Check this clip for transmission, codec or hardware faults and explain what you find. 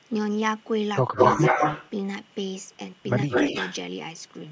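Two kinds of fault are present: brief dips in the speech while both ends talk at once, and a delayed echo of the speech coming back.

Speech suppressed in double talk, 1.13 to 1.19 s and 3.26 to 3.30 s: the speech drops sharply for a few tens of milliseconds, at its deepest by roughly 15 dB. This is likely an echo canceller that, with both sides active, couldn't separate the talker from loudspeaker echo and turned everything down.

Echo leak, 1.15 to 1.9 s and 3.3 to 3.76 s: a second copy of the speech trails the first, 169 ms behind in the first stretch and 180 ms in the second. The echo runs a little louder than the speech first, then about level with it. The likely cause is a loudspeaker on one side whose echo canceller let part of its microphone pickup through and sent it back.

The call's microphone processing band-limits the audio, with nothing above 8 kHz.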